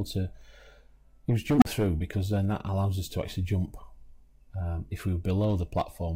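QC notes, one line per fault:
1.57–1.65 s unstable filter: runaway feedback swells a tone near 300 Hz to clipping within 51 ms; the waveform ramps to flat tops, then shows 36 ms of silence.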